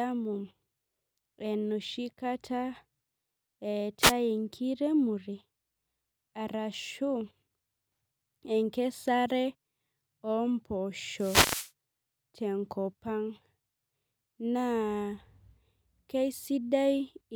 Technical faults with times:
4.01-4.13 wireless microphone noise hit
11.16-11.71 wireless microphone noise hit

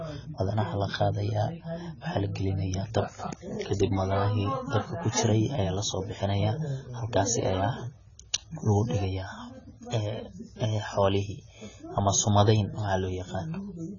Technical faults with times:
0.00-13.98 AAC compression

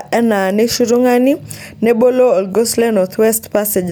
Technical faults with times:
none

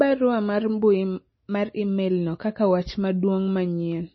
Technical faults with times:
0.00-4.15 MP3 compression
0.17-3.93 clock slip clicks

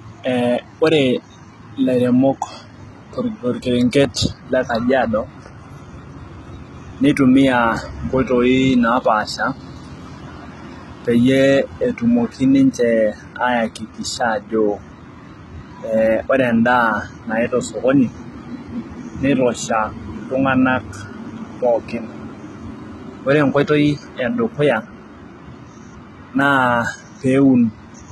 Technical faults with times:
0.00-28.12 HE-AAC compression

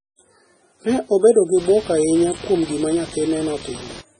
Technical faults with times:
0.00-4.20 MP3 compression
0.89-4.01 computer activity noise

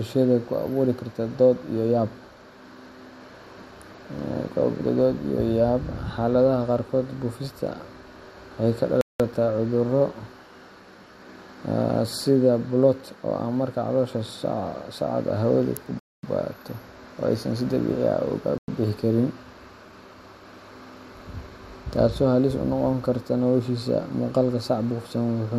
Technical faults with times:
9.01-9.20 Bluetooth stall
15.99-16.23 Bluetooth stall
18.58-18.68 Bluetooth stall

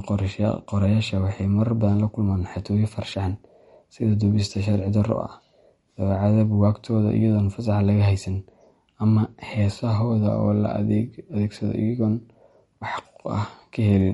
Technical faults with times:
0.00-14.14 MP3 compression

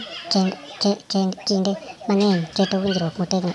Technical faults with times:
0.00-3.54 wrong sample rate

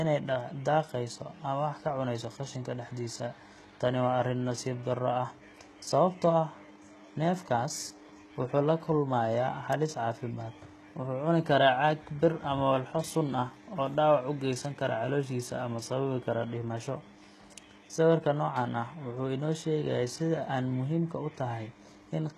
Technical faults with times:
0.00-22.38 HE-AAC compression

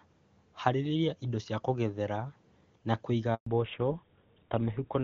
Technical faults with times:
3.34-3.46 handover gap
3.46-5.03 fallback to narrowband

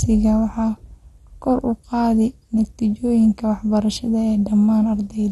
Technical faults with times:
0.00-5.31 MP2 compression

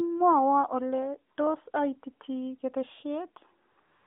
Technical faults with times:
1.36-1.38 AMR comfort noise
1.72-1.74 AMR comfort noise
3.72-4.06 AMR comfort noise

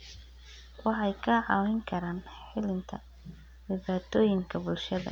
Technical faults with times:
0.00-5.12 mains hum

